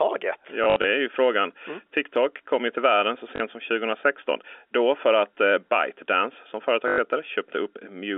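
Packet loss with last packet repeated occurs at 0.64–0.84 s, 3.36–3.40 s and 6.88–6.98 s. Gaps are filled by replaying the previous packet, so runs buzz near 50 Hz, which fits 20 ms packets. This is heard as brief robotic stutters.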